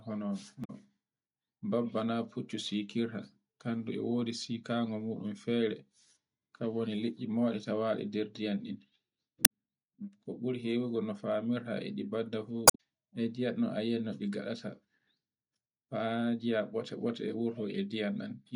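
Damaged data in a compressed stream causes three brief glitches in this speech: 0.61 to 0.70 s, 9.42 to 9.47 s, and 12.65 to 12.80 s just after "e ɗi badda fu". Each time, corrupted bytes make the decoder misread frames and resynchronise, producing a chirp, squawk, click or short hole.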